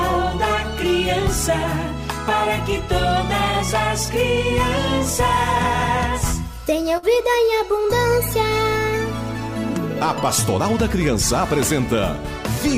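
At 6.97 to 7.06 s a burst of packet loss occurs: several packets in a row never arrived, so the receiver stretched the last sound for about 51 ms while fading it, then resumed with about 60 ms skipped. Unlike a plain dropout, the gap isn't silent.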